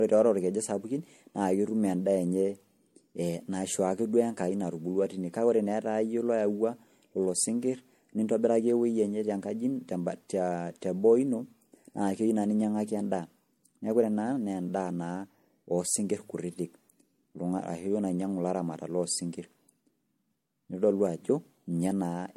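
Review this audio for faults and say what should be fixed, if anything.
Throughout the speech there is generation loss: swirly, smeared, hollow texture with blurred attacks, and nothing above 16.5 kHz. This likely comes from roughly four successive MP3 encodes, consistent with about 64 kbit/s, each requantising on a shifted frame grid so the errors accumulate. To prevent it, keep a lossless master and encode to MP3 only once, at the final step.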